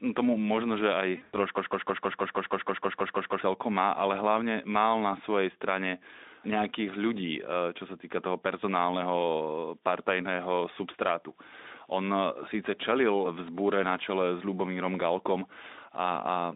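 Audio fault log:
1.17–1.35 s, VoIP packet loss concealed by the speech codec: after "no tomu možno že", lost frames (longest run 100 ms) become a fading smear, not clean silent gaps.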